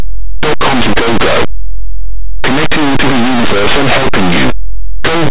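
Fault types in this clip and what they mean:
Linear audio read as companded: The speech was stored as plain 8-bit samples but decoded as mu-law. Tiny values on one side become the largest outputs. Harsh distortion runs throughout.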